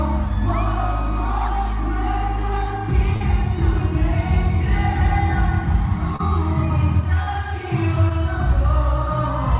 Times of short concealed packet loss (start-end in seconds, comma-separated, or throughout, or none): 3.16-3.22, 6.16-6.21, 7.23-7.29, 8.09-8.12